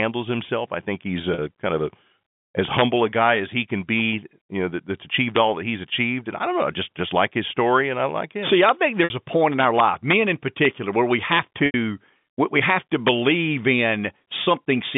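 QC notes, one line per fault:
1.34 to 1.38, 9.04 to 9.10, 11.66 to 11.74, 14.44 to 14.46: packet loss with pitch repetition. Gaps of 40, 60, 80 and 20 ms were bridged by repeating the last pitch cycle, which gives a brief held, buzzy tone. The waveform shows identical repeated cycles, and the spectrogram shows frozen flat harmonics. The longer gaps begin fading toward quiet.
2.60 to 2.83, 5.36 to 5.38, 8.47 to 8.69 (after "and I like him"), 9.60 to 10.13 (after "a point in"), 10.65, 11.32 to 11.39 (after "where we"), 12.70 to 12.73, 13.08: integer overflow. Peaks driven about 1 to 2 dB past full scale wrap to the opposite sign and produce violent cracks. The waveform shows full-range vertical flips, and the spectrogram shows broadband vertical streaks.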